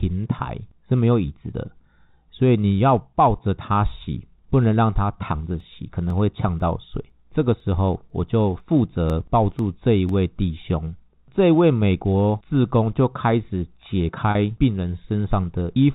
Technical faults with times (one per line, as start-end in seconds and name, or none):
5.60-10.09 periodic USB or driver dropouts
14.31-14.35 packet loss with pitch repetition